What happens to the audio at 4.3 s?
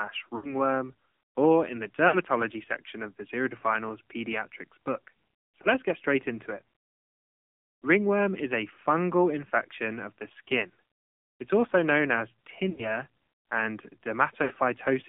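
The AMR narrowband mobile codec is at work at 4.3 s, as it is for the whole clip rather than starting there. The speech has been squeezed to telephone bandwidth, roughly 200 Hz to 3.5 kHz, and rebuilt from a vocal-tract model excited by a handful of pulses per subframe. The low bit budget, which fits AMR-NB's 7.4 kbps mode, leaves the voice plainly buzzy and synthetic, thin and boxy, with no air above the band edge.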